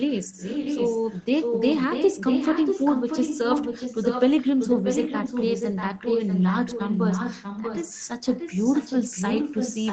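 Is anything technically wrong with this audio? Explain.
Yes. An echo leak runs from 0.0 to 1.24 s and again from 1.4 s to the end. A copy of the speech returns about 0.64 s late, only slightly quieter than the original, likely because a far-end loudspeaker's echo canceller let it through.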